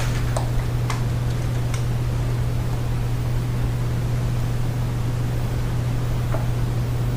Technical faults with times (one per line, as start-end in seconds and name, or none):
none